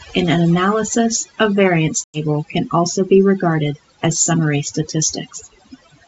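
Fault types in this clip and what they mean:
Overdone noise removal: heavy noise reduction pushes frequency bands near its noise estimate far down or off throughout, leaving near-silent gaps with twinkling specks. Unlike a steady band-limit, the loss flickers band by band as the sound changes.
Packet loss on an ADPCM call: between "an analysis of variance" and "can also be regarded", from 2.04 to 2.19 s, about 100 ms drops to hard-edged silence, roughly five packets' worth. The speech then comes back with brief, slight distortion while the decoder's predictor and step size realign. That uneven recovery sets it apart from a clean dropout.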